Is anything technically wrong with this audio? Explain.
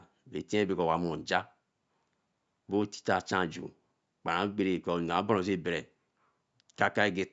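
No, nothing in this speech recording stood out as a technical problem on listening.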